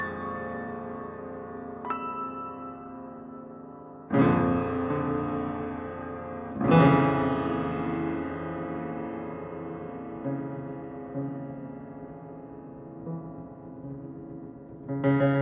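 No technical faults can be heard anywhere in this recording of sounds.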